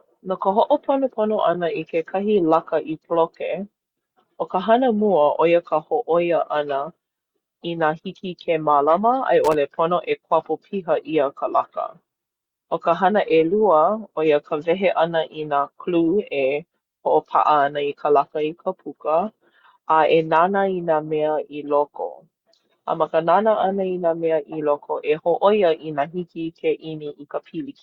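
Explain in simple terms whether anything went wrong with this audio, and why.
A worn or dirty contact in a cable or plug briefly lost and regained its connection, causing loose connector crackle. From about 9.44 to 9.54 seconds, the speech is chopped up by a short, irregular burst of scratchy crackling.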